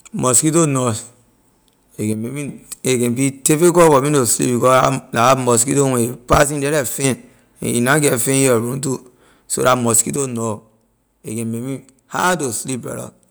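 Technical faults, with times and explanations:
2.13–2.48 s, 6.43–7.04 s and 10.16 s to the end, one channel drops out: the speech abruptly falls about 6 dB. Likely one stereo channel was lost before the mono sum.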